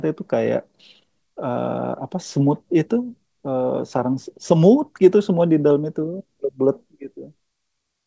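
Nothing in this speech stood out as a fault on listening.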